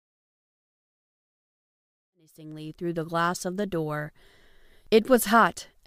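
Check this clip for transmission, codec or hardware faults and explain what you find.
No transmission, codec or hardware fault can be heard in this speech clip. The level rises in a smooth fade-in from around 2 s to full level at 3.34 s, with no click or hard edge, as an editor would shape it.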